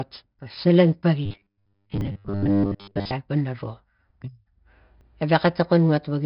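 All the way through, the speech carries a gritty hiss that rides on every loud moment, with roughness on sharp onsets. That's heavy 4-bit ADPCM compression: each sample is coded as a coarse step from a prediction, and the step size can't keep up, which fits a low bitrate somewhere around 44 kbps.

At 0.39 s the sound jumps ahead by roughly 10 ms, the first dropped buffer (overrun), likely from samples being overwritten before the software collected them.

From 1.26 to 3.13 s the speech turns into a stiff metallic buzz at 100 Hz that only loosely follows the speech. That's robotic sound from repeated short buffers, likely a 10 ms chunk replayed to fill gaps, with most of the real audio in that stretch skipped.

Inside that stretch, at 2.01 s, and again at 5.01 s, the sound leaps ahead by around 30 ms each time, two more dropped buffers.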